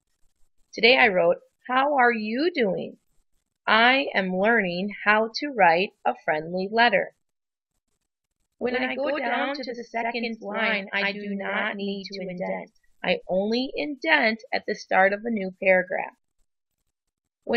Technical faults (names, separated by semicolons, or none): channel delay (doubling)